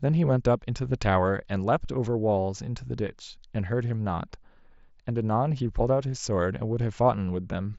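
At 7.08 s, concealed Bluetooth headset packet loss: a voice packet between headset and phone never arrived, a 7.5 ms gap that fits a single lost frame, and the receiver filled it by repeating a closely matching stretch of the preceding waveform. Through the light mSBC wideband coding, the patch is nearly inaudible.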